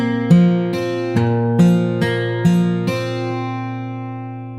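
No technical faults can be heard anywhere in the audio, and the signal stays intact throughout.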